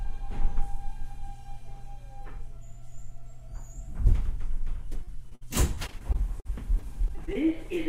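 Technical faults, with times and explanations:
5.03–7.37 s, repeated packet loss (robotic sound): 14 gaps, up to 57 ms each, are patched by continuing the preceding sound, leaving the audio choppy with pieces missing.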